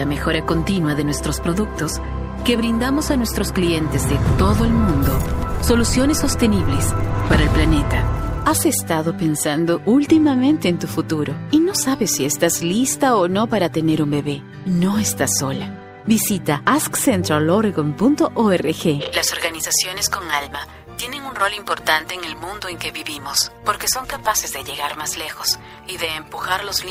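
No technical faults can be heard anywhere in the audio, from the first moment to the last.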